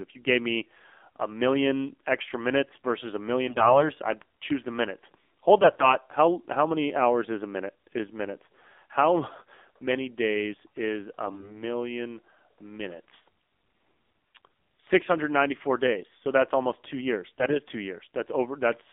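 Speech that sounds buzzy, thin and synthetic throughout, confined to roughly 250 Hz to 3.6 kHz with nothing bright above. This is the AMR narrowband mobile codec at a low mode, plainly audible damage that fits roughly 7.4 kbps. At 3.48–3.87 s, 5.58–5.94 s, 11.28–11.63 s and 17.38–17.59 s the voice keeps its pitch and level but turns hoarse, scratchy and gargly, worst around 11.3 s. These are AMR bit errors: flipped low-priority bits misplaced the excitation pulses and skewed the fine pitch, gain and spectral values.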